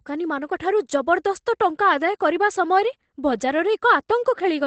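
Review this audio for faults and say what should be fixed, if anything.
The speech sounds muffled, hoarse and slightly robotic throughout, with nothing above about 8.7 kHz. That is Opus voice compression: the SILK linear-prediction coder is working in wideband and coding the excitation coarsely, which fits a bitrate around 12 kbps. Encoding at a higher bitrate would prevent this.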